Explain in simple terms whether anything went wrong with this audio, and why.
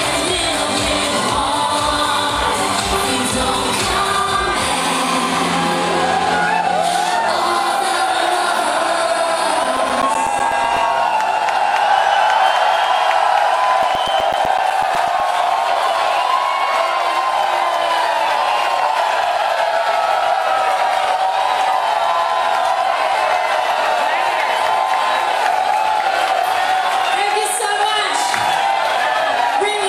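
CD scratch ticks appear from 9.52 to 10.77 s and from 13.70 to 15.20 s: evenly spaced tiny ticks, about nine a second, once per disc turn, unlike random vinyl crackle.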